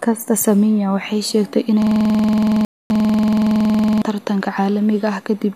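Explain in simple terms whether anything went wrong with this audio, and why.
Two things went wrong, both right after "waxay sheegtay".

From 1.82 to 4.02 s there is a system hang loop. The computer or its audio driver froze, but the sound hardware kept replaying the last chunk of audio it held. That chunk is about 46 ms long, which fits a 2048-sample buffer. It repeats 42 times in a row, at 21.5 times per second. A repeat that short doesn't sound like a stutter. It sounds like a steady, rough buzz pitched at that rate, replacing the speech for over two seconds.

Inside that stretch, from 2.65 to 2.90 s, there is a rebuffering stall. The player ran out of downloaded audio and went silent while it waited for more. When the data arrived, playback picked up exactly where it had stopped, so nothing is skipped. The cost is time: the stall adds about a quarter of a second of silence to the clip.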